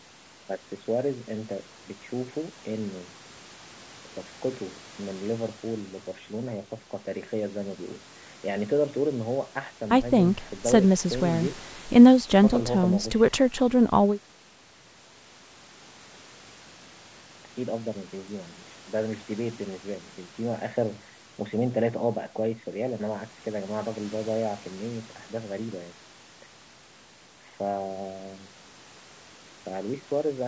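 Speech recording with no technical faults to report.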